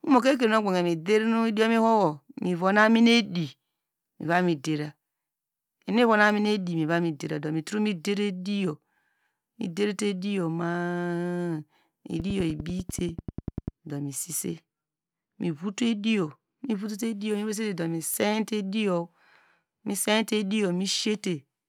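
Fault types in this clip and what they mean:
Train of clicks: a burst of near-identical pulses, evenly spaced at about 10 per second, ticks over the speech from 12.20 to 13.69 s, roughly fifteen of them, poking out a few decibels above the signal. That steady pattern points to something likely injecting pulses, like nearby equipment interference or a faulty connection.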